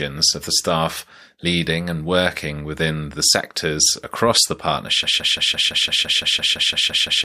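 At 5.03 s the speech turns into a broken-record loop: a piece about 170 ms long plays 13 times back to back, exactly the same each time, and runs to the end of the clip. The likely cause is that the player, encoder or stream stalled and kept sending the last fragment it held, so the speech that should follow is lost. A spectrogram shows an identical block tiled every 170 ms. The waveform repeats the same shape at that interval.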